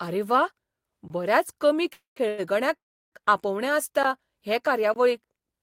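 At 1.08 to 1.10 s the speech drops into a 20 ms block of digital silence. Samples were replaced by zeros.

Just after "बऱ्याच कमी", call audio freeze stalls the speech at 1.93 to 2.18 s, 2.28 to 2.40 s and 2.76 to 3.14 s. A continuation of the last sound fills each stall, fading to silence in the first and last. Delayed packets and an emptied jitter buffer are the likely cause. Speech resumes intact, only later.

Short digital-silence holes return at 4.03 s (14 ms) and 4.94 to 4.96 s (20 ms), the first a tick.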